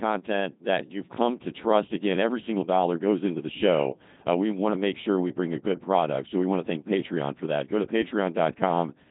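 From start to finish the speech sounds robotic and buzzy, with heavy smearing and nothing audible above about 3.8 kHz. This is the Codec 2 vocoder at work: rather than keeping the waveform, it sends only pitch, voicing, energy and a coarse spectral envelope, and the decoder rebuilds the speech from sine waves. The degree of damage fits its 2.4 kbit/s mode.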